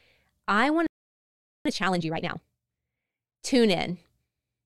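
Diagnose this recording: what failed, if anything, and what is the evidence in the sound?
Playback stall: the speech cuts to silence from 0.87 to 1.66 s, about 790 ms, then resumes, likely a starved or blocked player buffer.

Time-compressed catch-up: from 1.66 to 2.44 s the speech runs at twice speed, same pitch, as the player splices out pieces to drain its backlog.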